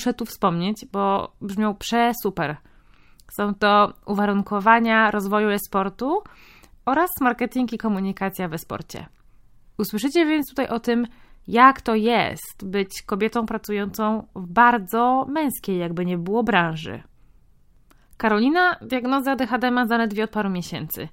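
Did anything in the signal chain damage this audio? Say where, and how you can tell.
Yes, at the codec stage: a corrupt frame got decoded at 12.86 s, right after "tym jak to jest" and before "kobietą pracującą w bardzo". It's a tiny, fairly quiet blip, about -40 dBFS. A few damaged frames were played anyway, so misread values threw energy into the wrong frequencies.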